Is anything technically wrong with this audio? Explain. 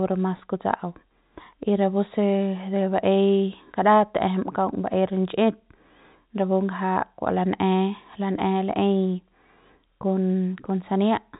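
No, nothing technically wrong turns up here.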